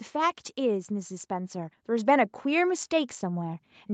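From 0.88 to 2.28 s the automatic gain rising kicks in: the call's gain control judges the speech too quiet and lifts it about 4 dB, so voice and background swell together.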